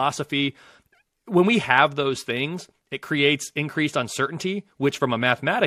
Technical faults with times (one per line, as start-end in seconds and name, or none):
4.97 DAB burbling